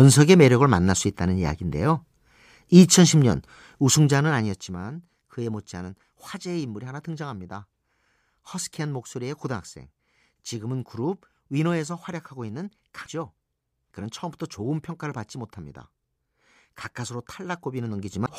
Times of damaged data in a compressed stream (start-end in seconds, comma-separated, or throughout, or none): 13.02-13.08, 18.22-18.29